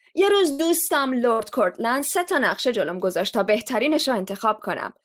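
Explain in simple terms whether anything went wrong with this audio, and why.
Burst of packet loss, at 0.51 to 0.61 s and again at 1.33 to 1.41 s. A few pieces of the speech were lost or arrived too late to play, so the receiver stretched out the last sound as a fading buzz or hiss, then jumped ahead, skipping roughly 80 and 60 ms of speech.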